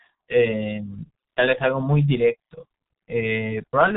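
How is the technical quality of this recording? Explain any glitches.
The technical quality is poor: the speech carries heavy G.723.1 codec damage from start to finish. Throughout, nothing reaches above 3.8 kHz, so the sound is muffled. The codec's slowly updated voice model, at a rate that fits its 6.3 kbit/s mode, smears consonants and leaves a hoarse, rough texture.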